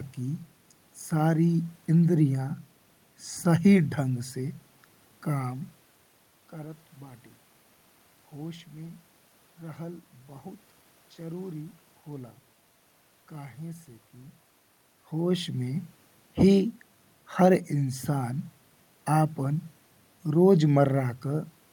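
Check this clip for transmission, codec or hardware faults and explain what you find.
Nothing stood out on listening; the room background and the level shifts around 5.5 and 14.5 seconds, where the talker moves relative to the microphone, belong to the recording itself.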